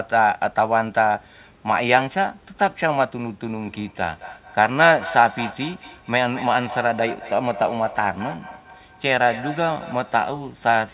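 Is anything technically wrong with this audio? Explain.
Yes. Feedback echo between two devices runs from 3.53 s to 10.19 s. A second device on the call replays this microphone's audio, which is picked up again. No echo canceller removes that copy, since each only removes what its own device plays, so each sound returns about every fifth of a second, thinner and ringing, peaking at about 13 dB below the speech. The narrowband sound, with nothing above 4 kHz, comes from the call codec, which fits G.711 telephone coding.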